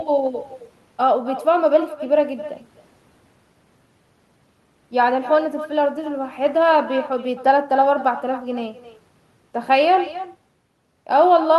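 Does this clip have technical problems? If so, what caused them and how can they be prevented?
Yes. The speech carries echo with no canceller from start to finish. Each phrase is followed by a quieter, thinner copy, about 15 dB below the original. The copy arrives roughly a third of a second later. That delay is the round trip through the network. The far end played the call on a loudspeaker, and its microphone picked the sound up and sent it back. Nothing removed it. Enabling acoustic echo cancellation at the far end, or having that side use headphones, prevents it.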